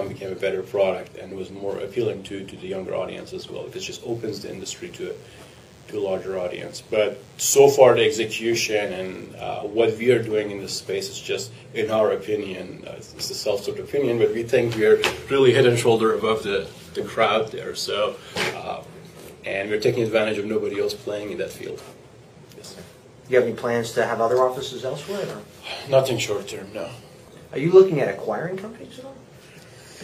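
A nearby DECT cordless phone or base station is pulsing radio bursts every 10 ms, and the audio circuitry rectifies them, producing DECT cordless phone buzz from 4.09 to 9.26 s: a steady, thin 100 Hz buzz rich in harmonics, sitting about 35 dB below the audio.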